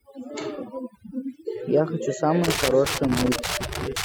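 The whole clip has overdone noise removal: the reducer is clamping bands near its noise estimate, so the background goes twinkly-silent. From 2.44 s to the end there's loose connector crackle, an irregular scratchy burst from a worn contact making and breaking, chopping the signal.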